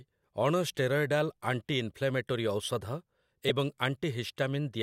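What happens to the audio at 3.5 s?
At 3.48 to 3.50 s there are lost LE Audio frames. About 15 ms of speech goes missing, which fits two dropped frames. The LC3 decoder repeats the last spectrum with randomised signs. This fills the gap with a brief, noisy smear.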